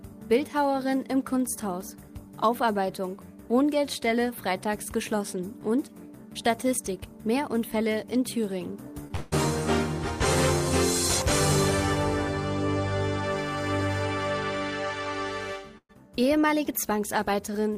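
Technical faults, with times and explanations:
9.07 to 9.11 s, short concealed packet loss: About 20 ms of audio never reached the decoder in time. The receiver covered the hole with roughly 21 ms of synthesised continuation, extending the preceding sound from its pitch or as shaped noise, then crossfaded back into the real signal. The result is a brief smear or wobble rather than a clean gap.
9.16 to 9.34 s, long network dropout: About 160 ms of audio is missing, and the receiver filled all of it, roughly 162 ms, by stretching the last sound into a fading buzz or hiss with no stretch of silence. This is likely a network outage in which no packets arrived. When the audio resumes, it picks up further on, without the lost portion.
15.78 to 15.91 s, burst of packet loss: About 120 ms of consecutive audio was lost or arrived too late to be played. The receiver concealed roughly 112 ms by continuing the last sound and turning it down as the gap went on, so it decays into a held buzz or fading hiss. 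About 60 ms of true silence follows before the signal returns further on, with the part in between missing.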